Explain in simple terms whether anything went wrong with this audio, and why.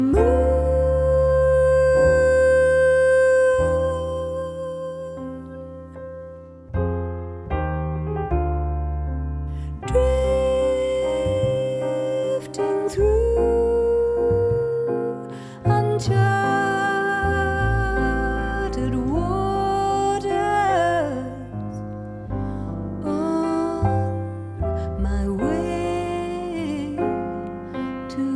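Nothing went wrong here: no faults are audible at any point in the recording.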